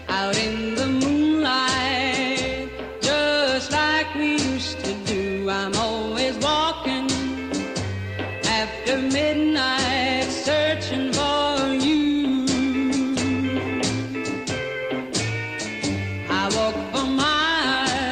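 No technical faults can be heard anywhere in the clip. Nothing in the audio points to any break, distortion or other defect in the way it was captured or delivered.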